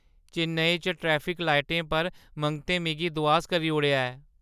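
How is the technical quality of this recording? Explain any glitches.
Listening closely, nothing in the recording stood out as a technical glitch.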